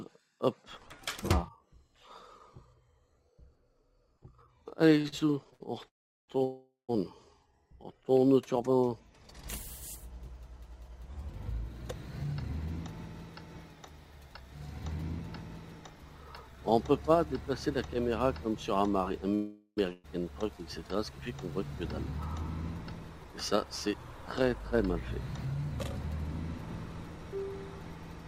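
From 5.01 to 5.62 s there's a burst of repeated stalls, a stutter. Four times the playout ran dry and the last bit of sound got stretched, the longest hold about 71 ms, with roughly a quarter of that stretch filled in. Nothing's lost, it just drags and hiccups.

Right after that come two call audio freezes, at 5.88 to 6.30 s and 6.44 to 6.91 s. The first holds the last sound for about 0.40 s, fading into silence almost immediately. The second lasts about 0.45 s, buzzing on longer before a short silent tail.

From 12.24 to 15.13 s there's a jitter buffer speed-up. The receiver trimmed tiny pitch-period slices to cut accumulated delay, only about a twentieth of a second in total. So it's just 1% faster with no pitch change, barely noticeable.

Two more freezes hit at 19.35 to 19.79 s, about 0.42 s of held, fading sound, and 19.93 to 20.06 s, a brief 0.11 s buzz with no silence. In every freeze the audio picks up exactly where it stopped, just late. 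The likely cause each time is packets being held up in transit, draining the jitter buffer.

A second speed-up runs from 23.55 to 27.44 s. This time about a tenth of a second was trimmed, so playback runs 3% fast while the pitch stays put.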